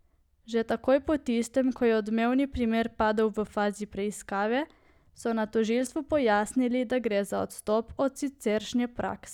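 No technical faults are audible anywhere in the speech recording.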